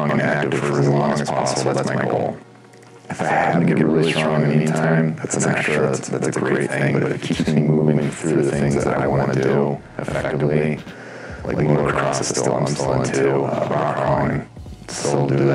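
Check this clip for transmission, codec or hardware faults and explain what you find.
There's one fault, and it runs the whole way through: channel delay (doubling). One channel arrives about 92.88 ms late, which fits a 4096-sample buffer, and once both get summed to mono, that late copy sits at equal level as a distinct slap echo trailing every sound.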